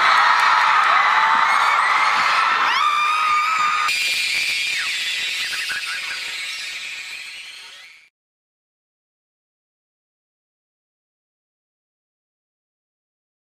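From 3.88 s to the end, the audio turns into a robotic buzz at about 92 Hz with no clear octave shift. This is planar audio read as interleaved: each 10.88 ms block holding all left then all right samples is read as alternating pairs, so every block plays twice at double speed.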